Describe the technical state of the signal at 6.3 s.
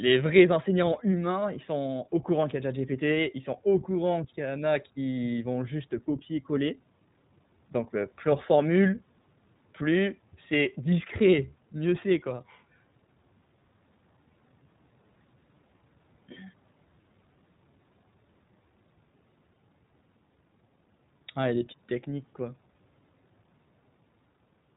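At 6.3 s the speech is carried through the iLBC codec, as it is for the whole clip. Nothing passes above 3.8 kHz. Each short frame, consistent with 20 ms at about 15.2 kbps, is coded independently, so the voice sounds plainly rough and synthetic.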